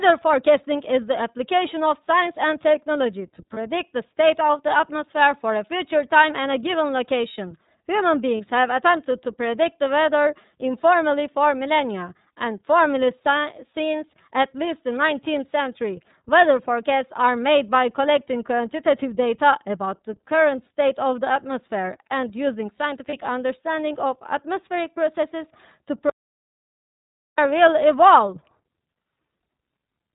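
Throughout the speech, the signal has passed through the iLBC codec, which codes each frame's excitation independently and discards everything above 4 kHz. The 30 ms framing fits iLBC's 13.33 kbps mode. The codec damage is plainly audible: the voice is narrowband and muffled at the top, with a slightly rough, synthetic edge to vowels and consonants that comes from the coarse excitation model rather than from the recording itself.

Lost iLBC frames occur at 3.53 s, 8.37 s and 23.09 s. Each is a single missing packet of 30 ms. At each point the decoder had nothing to play, so it repeated the last pitch cycle with added noise to bridge the gap. Each loss is heard as a brief held, faintly buzzy vowel sound. Because iLBC frames do not depend on their predecessors, the speech returns to clean decoding immediately after each loss.

An audio dropout to silence runs from 26.10 s to 27.38 s, about 1.3 s. 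The input feeding the encoder was likely lost, through a disconnection, link failure or mute, while silence continued to be written. The speech cuts off abruptly into silence with no room tone at all, then resumes mid-flow. Whatever was spoken during that stretch is gone.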